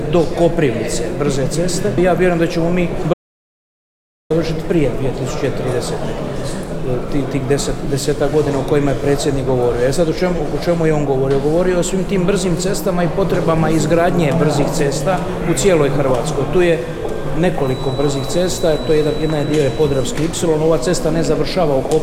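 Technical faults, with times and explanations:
3.14 to 4.30 s, audio dropout to silence: the sound stops mid-flow and the gap is silent for about 1.17 s, with no room tone or noise floor, before the audio returns just as abruptly. The likely cause is the input being lost, through a disconnected device, failed link or stray mute, while recording carried on writing zeros. Unlike a natural pause or noise gate, nothing fades and no background remains, so the missing material is simply gone.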